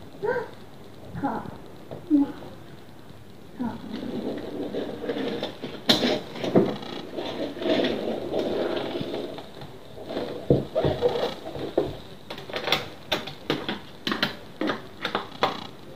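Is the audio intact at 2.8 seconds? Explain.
Yes, the audio is intact at 2.8 seconds, with no dropout, glitch or other fault at that moment.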